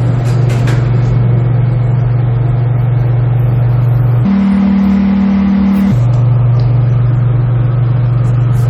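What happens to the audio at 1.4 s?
Nothing goes wrong at 1.4 s; the sound carries on intact through that moment with no dropout, click, distortion or other fault.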